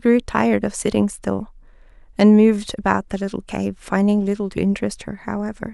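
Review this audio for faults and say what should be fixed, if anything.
Nothing in the signal needs fixing, as the speech holds unbroken continuity with no audible technical faults.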